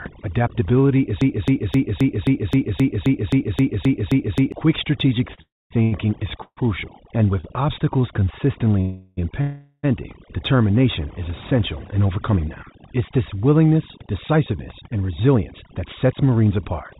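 All through the recording the background has been pressed down, with small twinkling specks where it used to be. That is overdone noise removal: the noise reducer was set so hard that it turned individual frequency bands down or off whenever they came close to its noise estimate, and the quieter parts of the speech were taken out along with the noise. Everything sits inside a band that stops at 4 kHz, which fits a narrowband call path such as G.711 mu-law.

From 1.21 s to 4.52 s a single fragment about 0.26 s long plays 13 times back to back, exactly the same each time, like a needle stuck in a groove. This broken-record loop most likely comes from a player, encoder or stream that stalled and kept sending the last piece it held. The speech that belonged in those three-odd seconds never arrives.

Between 5.34 s and 7.45 s the speech stutters and drags, held up four times for about 0.29 s in total, with the longest hold at 134 ms. 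These repeated stalls mean packets kept arriving late, so the jitter buffer emptied again and again and the receiver stretched the last sound each time until it could carry on. Nothing is lost; the audio is only pulled out of its timing.

Inside that stretch, from 5.42 s to 5.72 s, the sound briefly buzzes on and then drops to silence for about 0.23 s before resuming from where it stopped. This is a call audio freeze, most likely caused by delayed packets leaving the jitter buffer dry while the receiver filled the wait with a fading continuation of the last sound.

From 7.17 s to 8.65 s the speech slows to about 94 % of its pace while keeping the same pitch, and sounds slightly drawn out. This is a jitter buffer slow-down. To rebuild its reserve, the receiver repeated single pitch periods and bits of pauses, adding about 93 ms across the passage.

Two more freezes follow. From 8.81 s to 9.19 s the last sound is held as a fading buzz for about 0.36 s without ever reaching silence. 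From 9.41 s to 9.85 s it is held for about 0.42 s, ending with a brief moment of quiet. Both most likely come from late packets, and afterwards the audio picks up where it left off.

Finally the pace rushes forward at an unchanged pitch. Between 11.91 s and 12.38 s it runs at about 110 % speed, and from 14.00 s to the end at about 109 %. Each time the receiver was holding more buffered audio than it aims for, so it cut out short runs of pitch periods to bring the delay down. That removes a few hundredths of a second in the first passage and roughly a third of a second in the second, making the speech sound hurried.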